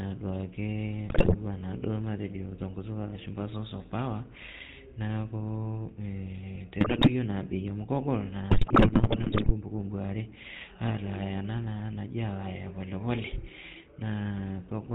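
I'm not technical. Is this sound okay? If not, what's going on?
No. GSM full-rate codec, throughout: the speech went through an early mobile-phone codec that rebuilds the voice from a rough model, cutting off everything above 4 kHz and leaving a buzzy, gravelly roughness. GSM bit errors, at 1.08 to 1.35 s, 6.80 to 7.10 s and 8.50 to 9.52 s: corrupted data garbled the decoder's settings, so the voice briefly breaks into squawks, pops and gargling.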